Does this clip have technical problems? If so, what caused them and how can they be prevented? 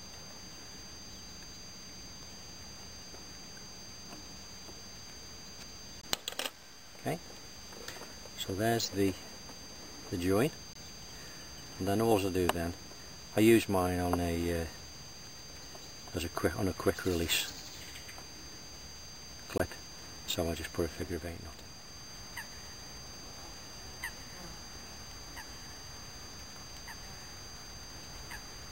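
Yes. The sound cuts to silence three times: at 6.01 to 6.04 s, 10.73 to 10.76 s and 19.58 to 19.60 s. Each gap lasts about 20 ms. The sound then resumes as if it had kept playing underneath. This is likely a Bluetooth dropout. Each hole fits one audio packet that reached the headphones too late and was discarded. Keeping the source close to the headphones, with a clear path and little nearby 2.4 GHz traffic, prevents it.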